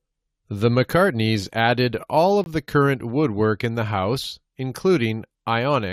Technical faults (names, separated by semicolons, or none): gap between stream segments